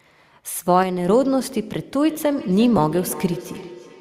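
From 0.83 to 1.08 s the speech level falls abruptly by about 6 dB, most likely one channel dropping out. The waveform envelope steps down and back up with sharp edges. From 2.07 s a feedback echo between two devices begins. The speech comes round again roughly every 300 ms, peaking about 15 dB below it, and shows as faint repeated smeared copies on a spectrogram. At 2.77 s a lost LE Audio frame lasting 7.5 ms, which fits one LC3 frame, is concealed with a brief noisy smear. This appears as a thin vertical patch of diffuse energy. The light graininess, likely from Bluetooth LC3 compression, stays in the background.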